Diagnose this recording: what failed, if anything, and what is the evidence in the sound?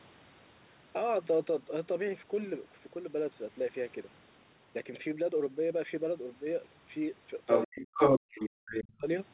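A second voice comes through from 7.46 to 8.46 s, somewhat louder than the talker, and again briefly at 8.72 s at about the same level. This is the other side's voice leaking through, likely because the call processing stage's echo canceller left loudspeaker sound in the microphone signal.

The talker's speech drops almost to silence from 7.65 to 7.97 s and again from 8.13 to 9.06 s, overlapping that leaked voice. This is speech suppressed in double talk. The echo canceller likely mistook the talker for echo and attenuated both.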